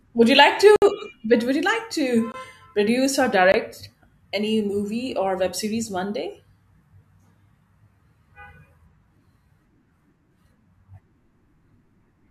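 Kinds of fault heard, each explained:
Block of digital silence: the speech drops abruptly to silence and returns with no fade, a 60 ms hole after "would you like" and two 20 ms gaps around "like to" and "produce or"; samples were zeroed, typically when the output buffer wasn't filled in time.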